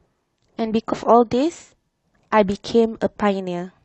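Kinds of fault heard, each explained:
Compressed frames skipped: several whole frames of the encoded speech are never decoded, so near 0.89 s the audio leaps ahead by roughly 300 ms, a multiple of its 46.4 ms frame.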